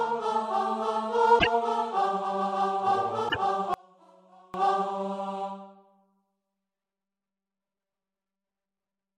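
At 1.38 s the sound jumps forward and the next 90 ms or so comes out garbled instead of continuous audio. The same thing happens again from 3.28 to 3.37 s. This is most likely a broken MP3 bit reservoir. Frames appear to have been cut, so the frames that follow reach back for borrowed data and decode someone else's bytes. The garbled stretch spans about four frames of 24 ms each before decoding recovers.

From 3.74 to 4.54 s, in a mono fold-down, the sound suddenly collapses to a faint residue about 29 dB quieter. The centred content nearly disappears, leaving only what differs between the channels. The likely cause is one channel inverted. With one side's polarity reversed for those 0.8 seconds, the material common to both channels cancels when they are summed.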